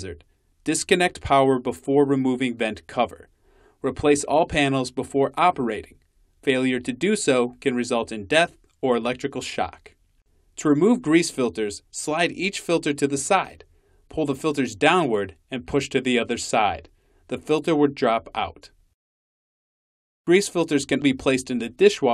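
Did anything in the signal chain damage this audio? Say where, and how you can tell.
No, nothing in the chain audibly damaged this audio: the signal stays continuous and stable, with no stage leaving a mark a listener could point to.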